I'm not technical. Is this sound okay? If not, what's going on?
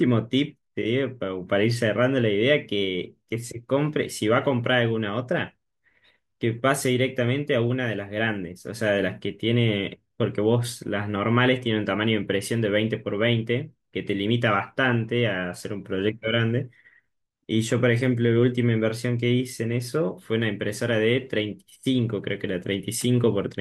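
Yes, no faults to report in this speech recording.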